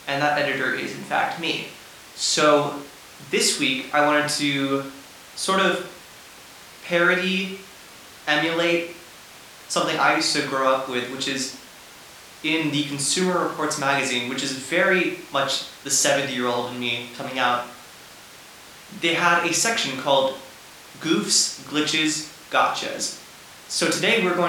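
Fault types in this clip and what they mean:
No fault types appear in this clip.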